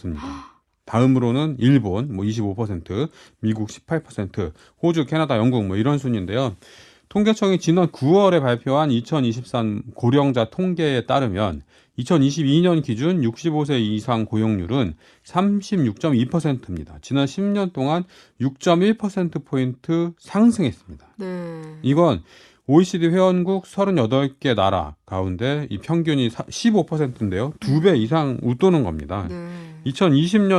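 Nothing goes wrong anywhere in this speech recording, so there's no technical fault to point to at any moment.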